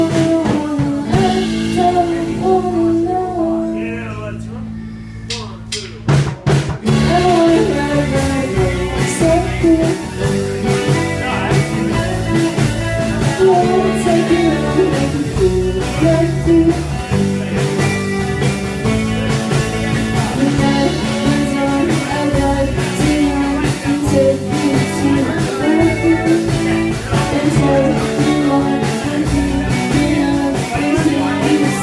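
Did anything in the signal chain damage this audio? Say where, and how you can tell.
No, nothing damaged it.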